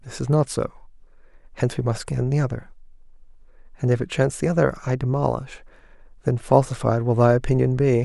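Nothing stood out as a technical fault on listening to this speech recording.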